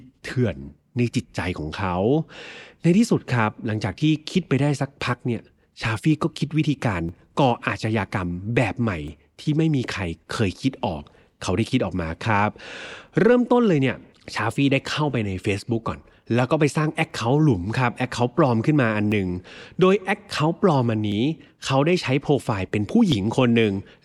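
From 1.10 s to 23.12 s, periodic USB or driver dropouts skip roughly a millisecond of audio every 2.0 s, heard as regular ticks within the speech.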